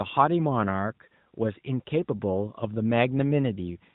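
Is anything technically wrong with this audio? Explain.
No, nothing is technically wrong with this audio.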